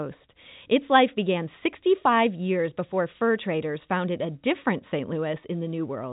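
There are no technical faults to describe in time order in this speech clip, which comes through the telephone band with nothing above about 3.8 kHz, as G.711 coding allows.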